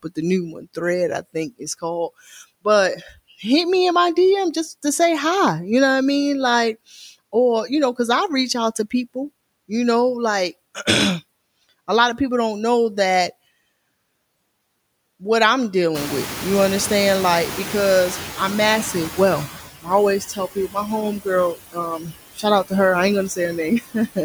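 Throughout the speech, noise suppressor artifacts are present: the steady background is pulled down by about 20 dB between phrases and swells back under them. On a spectrogram the noise floor flickers in patchy, frame-sized blocks rather than sitting evenly.

From 0.53 to 0.77 s, after "the new" and before "I think is called", speech is cut by the noise suppressor. Roughly a tenth of a second of soft speech is taken for noise and dips by up to about 9 dB, so it sounds swallowed. The waveform shows a brief notch in the envelope, and the spectrogram loses energy there.

At 15.94 s, just after "what I'm", the room noise jumps by about 21 dB, and the noise suppressor is caught catching up. At first the louder noise passes with only about 10 dB of reduction, sitting about 13 dB under the speech. Over 3.6 s, to 19.54 s, the estimate adapts and the noise sinks. A spectrogram shows a band of noise appearing abruptly, then fading gradually.

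The same speech cutting returns at 20.28 to 20.76 s (down by up to about 13 dB), 21.22 to 22.72 s just before "her I ain't" (up to about 18 dB, the worst case, about 0.4 s of speech affected in total), and 23.81 to 24.18 s (up to about 15 dB). The affected speech sounds swallowed, showing as truncated energy and gaps in the spectrogram.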